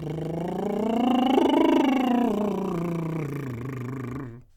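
The music runs without any audible technical faults at any point.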